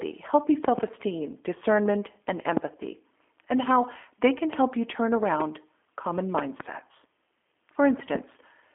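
From start to finish the speech carries G.729 codec damage, plainly audible: synthetic roughness rebuilt from coarse pulse excitation, which fits 8 kbit/s G.729A. The line band is 250 Hz to 3.4 kHz, and a spectrogram shows a hard ceiling, with nothing above 3.6 kHz.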